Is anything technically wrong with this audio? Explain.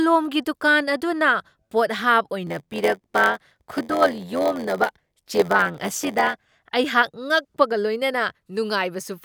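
Yes, there's a block size mismatch with zero padding in this speech, running from about 2.46 s to 6.46 s. One stage is handing over shorter chunks than the next stage expects, so each block gets topped up with silence. That tiny gap in every block comes through as a buzz at roughly 86 Hz, which fits a 512-sample read size, and the speech drags to about 0.94 times normal speed while keeping its usual timbre.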